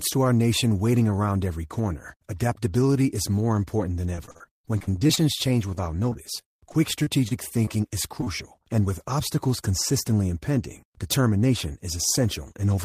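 From 4.15 to 5.19 s the speech turns choppy and robotic, with pieces dropping out. This is repeated packet loss: audio kept going missing, each hole (up to 49 ms) patched by extending the previous sound, covering about a quarter of the stretch. From 5.75 to 7.69 s the same repeated packet loss returns more lightly, with shorter holes of up to 24 ms and about a tenth of the span filled in. At 8.21 to 8.24 s and again at 8.24 to 8.28 s, brief smears come from short concealed packet loss: about 20 ms of audio arrived too late each time, and the receiver bridged it by continuing the last sound before blending back.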